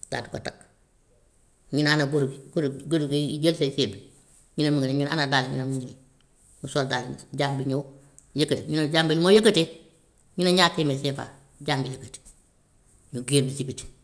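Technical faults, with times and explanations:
No technical faults are heard in this clip.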